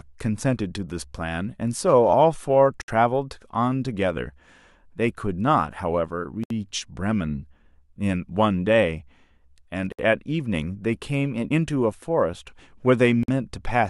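At 2.82, 6.44, 9.92 and 13.23 s the speech drops out for a moment, about 66, 68, 64 and 51 ms, and then picks up right where it left off. These are gaps at a join of encoded pieces: each chunk went through the encoder on its own, and the start-up delay and final-frame padding were never trimmed before splicing. The edges are smeared by the codec.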